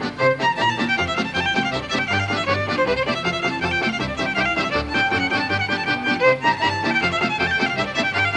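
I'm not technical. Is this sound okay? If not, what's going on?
Yes, nothing stood out as wrong when listening to it.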